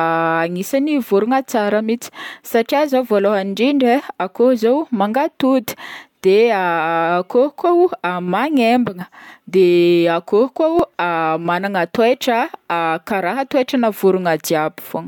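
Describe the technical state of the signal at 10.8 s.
At 10.79 s there is a dropped buffer, likely an overrun: roughly 1.5 ms of speech is lost, leaving a waveform discontinuity and a thin vertical broadband line on the spectrogram.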